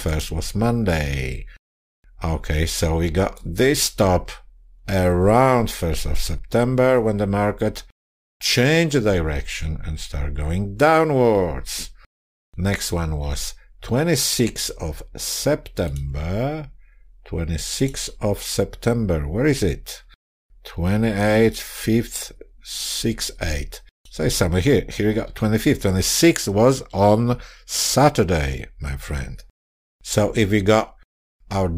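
Throughout, sample clock jitter of a few microseconds leaves hiss about 30 dB down, a spectrogram haze tracking loud, bright passages and vanishing in silences.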